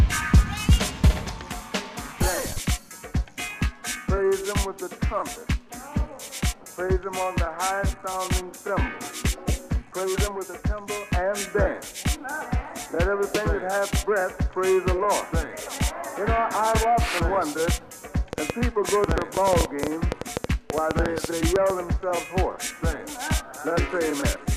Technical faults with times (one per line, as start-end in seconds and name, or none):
18.33-21.71 train of clicks